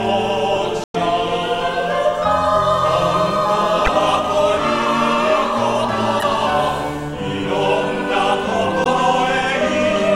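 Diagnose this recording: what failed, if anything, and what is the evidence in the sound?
The compressed stream carries damaged data: the decoder misreads corrupted frames, loses sync and hunts for the next frame header. Each time, a brief chirp, squawk, click or short hole replaces the sound, at 0.83 to 0.96 s, 3.84 to 3.88 s, 6.19 to 6.23 s and 8.83 to 8.87 s.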